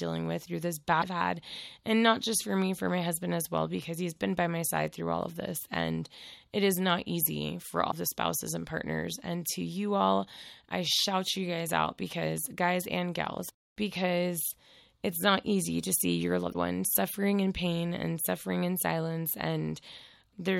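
At 0.98, 7.88 and 16.50 s, just after "with through this", "is not easy for" and "easy to see your", damaged data in a compressed stream corrupts frames. The decoder loses sync, and each event is a short blip of about 55 ms.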